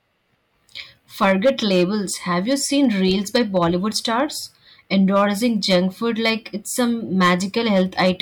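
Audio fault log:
1.22–1.83 s, 2.51–4.20 s, 4.95–5.79 s, 6.26–6.30 s, 7.21–7.34 s, 7.74–8.20 s: hard clipping. Speech peaks overran the headroom by about 2 to 7 dB and were cut flat. The flat tops add high harmonics, heard as harsh crackle.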